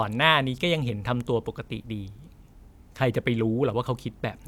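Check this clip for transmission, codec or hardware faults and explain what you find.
Nothing wrong can be heard anywhere in this speech.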